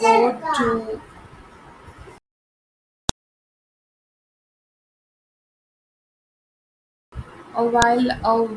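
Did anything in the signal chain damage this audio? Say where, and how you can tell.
Yes. A file header played as audio occurs at 3.09 s and 7.82 s, heard as a sharp, loud click in the speech, independent of the surrounding sound. At the storage or streaming stage, WAV pieces were joined with their headers intact, so header bytes play as samples.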